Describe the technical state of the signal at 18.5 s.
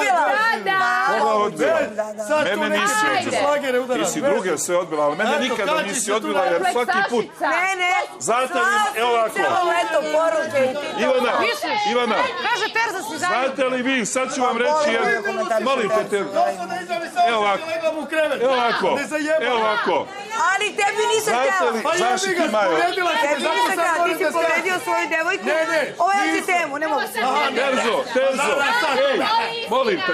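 At 18.5 s the audio carries GSM signalling bursts, running from 17.93 to 18.73 s. A nearby 2G phone is exchanging short signalling bursts with the network. The audio circuit rectifies that radio energy and turns it into sound. The result is a galloping dit-dit-dit of brief buzzes at about 217 Hz. It sits roughly 20 dB below the wanted signal.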